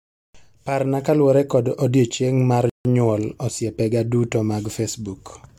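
At 2.70 s the speech halts in a rebuffering stall. The player ran dry and waited for data. Silence lasts to 2.85 s, then resumes seamlessly, adding 155 ms.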